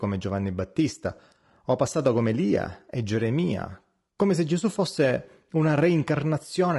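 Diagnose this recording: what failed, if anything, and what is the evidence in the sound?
The failure sits at the codec stage, across the whole speech clip. Voices sound rough and grainy, with noise between the harmonics and a synthetic top band. The likely cause is low-delay AAC compression (AAC-ELD), whose short frames resolve pitch poorly. The damage fits roughly 32 kbps.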